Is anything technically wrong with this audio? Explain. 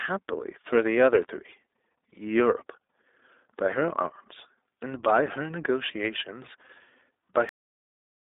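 Yes, there are two problems. Throughout, the speech sounds boxed-in and slightly buzzy and synthetic, with nothing above about 3.8 kHz. This is the iLBC codec, a narrowband VoIP coder that codes each 20 ms frame's excitation on its own. The damage is plainly audible and fits its 15.2 kbps mode.

At 7.49 s the speech stops dead mid-sound and falls straight into digital silence with no decay. This is a cut-off end: the final buffers were never written or played, so the last 0.74 s of the file is empty.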